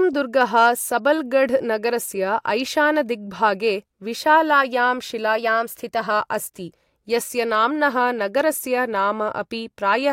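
From 0.42 to 0.68 s, a stage in the chain receives more level than it can pass, overdriven by about 2 dB, so the loudest peaks are sheared off flat. This is hard clipping. Squared-off tops add harmonics high up the spectrum, and because the overload is small, the speech picks up a brief crackly edge on its peaks for about a quarter of a second rather than a continuous fuzz.

Between 5.37 and 6.11 s, the playback rate jumps by about 5.4% and then returns, most likely a drift correction step, where clock-matching software changes rate in one move to rebalance its buffer. Speed and pitch rise together by about 91 cents, close to a semitone, so for roughly three quarters of a second the speech sounds slightly hurried and raised before snapping back to its normal pitch and pace.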